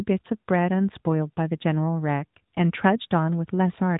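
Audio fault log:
Throughout: AMR narrowband mobile codec. The speech is squeezed into the telephone band, with nothing above 3.8 kHz, and carries a plainly audible buzzy, synthetic edge from a vocal-tract model rebuilding each 5 ms from a few pulses. The degree of damage fits a mid-rate AMR-NB mode near 10 kbps. Unlike a plain low-pass filter, the band limit comes with that artificial, reconstructed texture rather than just muffled clean sound.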